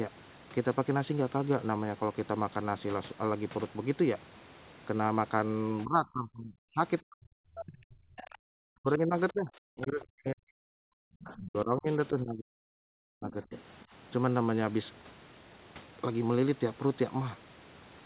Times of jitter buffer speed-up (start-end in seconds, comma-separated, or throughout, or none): none